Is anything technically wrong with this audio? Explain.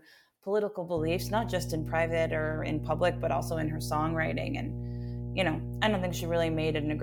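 Yes. From 0.97 s to the end there is mains hum: a loud steady 60 Hz buzz from power-line coupling, probably a ground loop, drawn on a spectrogram as a horizontal line at 60 Hz.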